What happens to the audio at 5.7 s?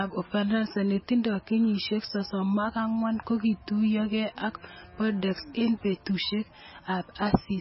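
At 5.7 s, as throughout the clip, the speech carries heavy MP3 compression damage, likely from encoding at a very low bitrate near 17 kbps. Nothing above 5.6 kHz survives, so the sound is dull, and starved frequency lines flicker between frames, giving a watery, swirly texture.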